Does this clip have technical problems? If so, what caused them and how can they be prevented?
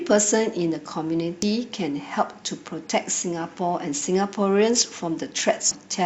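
Yes. Damaged data in a compressed stream causes brief blips at 1.42 s and 5.71 s, where corrupted bytes made the decoder misread frames and lose sync before finding the next frame header. Verifying transfers with checksums and keeping metadata out of the audio stream prevents this.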